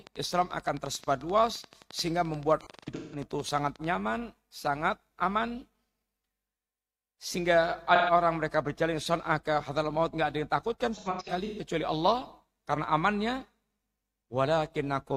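Right from 0.07 s up to about 3.85 s there's a train of clicks, a regular tick at roughly 11.4 per second, about forty of them, each much the same shape and peaking a few dB above the speech, so they're audible in the pauses too. That steady, evenly spaced pulse is most likely interference from nearby gear or a faulty connection or power supply.

Overlapping the tail of that, from 2.61 to 3.22 s, comes the first stretch of AAC frame loss with concealment. About 341 ms of audio went missing, scattered across half a second, with the longest gap around 150 ms. The decoder patches each hole from the last good spectrum, so you get smeared, noisy, phasey bits instead of clean speech. A shorter loss of 128 ms at 7.95 to 8.10 s sounds like one brief smudge. From 10.95 to 11.60 s there's another scattered 341 ms loss, again with runs up to about 150 ms. The amounts point to roughly 43 ms AAC frames being dropped.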